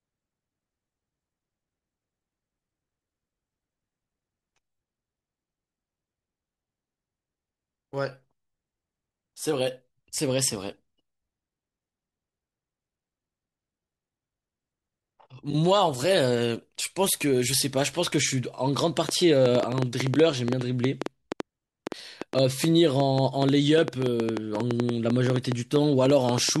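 From 19.09 s to 26.57 s, the speech carries a train of clicks: about fifty sharp, near-identical ticks at roughly 7.1 per second, unevenly spaced, standing around 15 dB above the signal and continuing through the pauses. The likely cause is interference from nearby equipment or a faulty connection or power supply injecting pulses. On a waveform they appear as narrow spikes over the speech; on a spectrogram, as thin vertical broadband lines scattered irregularly across that span.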